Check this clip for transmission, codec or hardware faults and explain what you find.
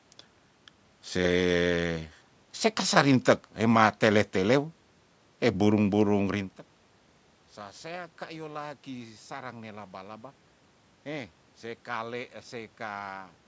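Nothing here points to a transmission, codec or hardware problem: the speech sits within the usual call microphone processing with nothing above 8 kHz, the room noise is simply part of the recording, and the level shift around 6.5 s is just the talker moving relative to the mic.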